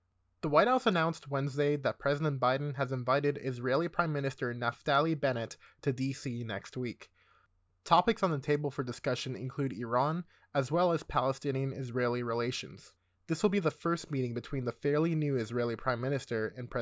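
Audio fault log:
No technical fault can be heard anywhere in the speech signal.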